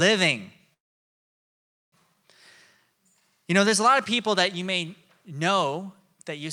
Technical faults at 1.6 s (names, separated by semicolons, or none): call audio freeze